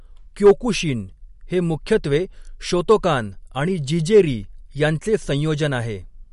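Throughout the speech, likely MP3 compression has dropped weak frequency lines and cut everything above 11.2 kHz, a loss that fits a bitrate near 48 kbps, leaving a plainly audible watery swirl. At 0.45 to 0.51 s, 2.90 s and 4.16 to 4.20 s, hard clipping flattens peaks driven about 4 dB, then about 2 dB twice, past the limit, heard as brief crackle.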